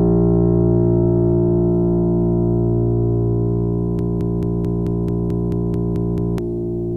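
At 3.99 s the music catches on a broken-record loop: a slice of about 0.22 s repeats exactly, back to back, eleven times until 6.38 s. It's likely the player or stream stalled and kept resending its last fragment, so the music that belonged there is gone.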